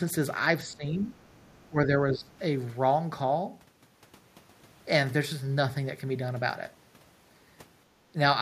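From 0.64 to 1.15 s the speech dips by around 10 dB, then sinks deeper, around 20 dB, from 1.67 to 1.93 s, and around 15 dB from 2.12 to 2.32 s. This is speech suppressed in double talk, likely because the echo canceller turned the talker down while the far side was speaking. Overlapping the first dip, from 1.06 to 1.66 s, a second voice leaks faintly through, around 35 dB below the speech. This is the other side's voice leaking through, likely residual loudspeaker echo that the canceller failed to remove from the microphone signal.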